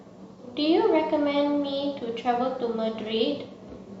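Speech recording with no technical faults audible anywhere in the clip.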